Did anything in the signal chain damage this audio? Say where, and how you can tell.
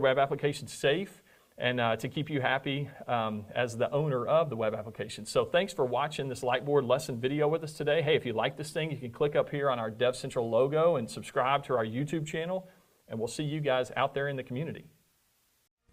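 No, nothing in the chain from capture to playback has left an audible mark on this audio, and the signal holds steady and continuous throughout.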